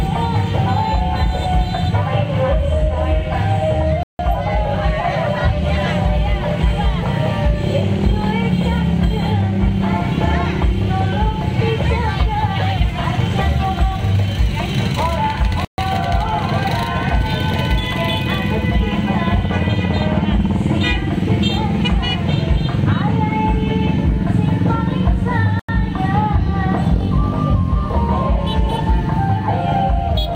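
The audio drops to complete silence three times: from 4.03 to 4.19 s (161 ms), from 15.65 to 15.78 s (133 ms), and from 25.59 to 25.69 s (92 ms), after which playback resumes. The pattern is likely a Bluetooth stall. Radio interference delays packets on the wireless link, the headphones' receive buffer empties, and output halts until the retransmitted data arrives. The gaps are clean cuts with no noise or distortion.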